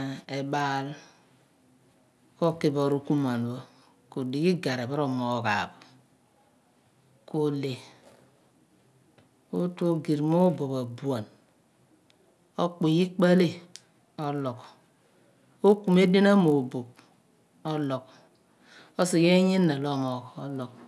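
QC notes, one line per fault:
Throughout: resampler restarted on every block. Each 20 ms block was converted from 48 kHz to 24 kHz alone, leaving edge errors heard as a 50 Hz buzz under the speech.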